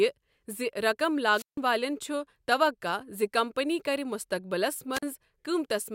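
At 1.31 s, just after "زِ رقم", a wireless microphone squelch dropout occurs. The radio signal from the transmitter weakens. Hiss rises, then the receiver's squelch mutes the output for about 155 ms. The speech comes back by 1.58 s. A second, shorter dropout follows at 4.93 s, after "کمپنی کر مستقبلس". This time the hole of near silence lasts about 43 ms. The speech returns by 5.03 s.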